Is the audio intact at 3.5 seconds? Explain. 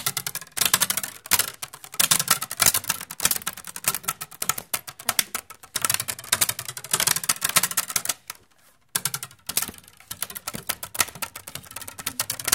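Yes, at 3.5 seconds the sound plays through cleanly, with no dropout, click, distortion or other fault at that moment.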